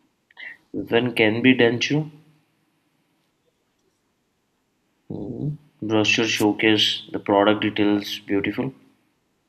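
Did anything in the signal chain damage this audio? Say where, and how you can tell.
Yes. The damage enters at the radio link of an analogue FM wireless microphone, ahead of any digital stage. From 6.35 to 6.44 s the received signal fades, most likely because reflected paths cancel the direct one, and the receiver's own noise rises into the gap. That is what marks the wireless microphone noise hit: a brief swish of static lasting about a tenth of a second.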